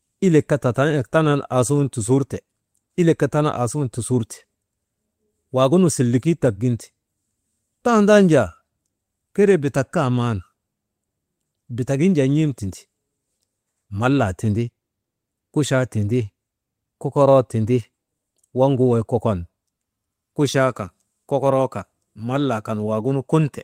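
Speech recording with no technical faults to be heard.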